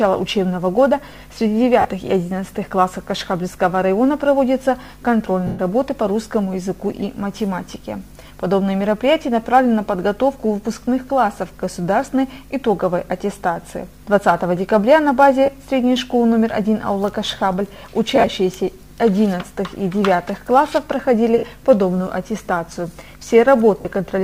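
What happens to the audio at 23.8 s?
At 23.81 s, lost LE Audio frames interrupt the Bluetooth stream for 40 ms, until 23.85 s, which fits a run of four 10 ms frames. With no data arriving, the LC3 decoder fills the gap by repeating the last good spectrum with its signs randomised, fading it after the first few frames. Any tone at that moment smears into noise for the length of the gap before the normal signal resumes.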